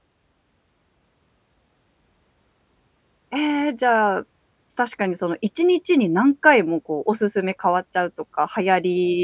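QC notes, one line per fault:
No fault turns up anywhere in this speech recording. There is nothing here that needs a QC note.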